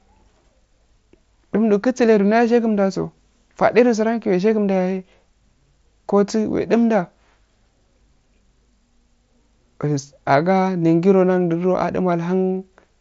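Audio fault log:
No faults are heard in this speech clip. It has passed through a Bluetooth mSBC headset codec, which leaves nothing above about 7.7 kHz and a light grain on the louder sounds.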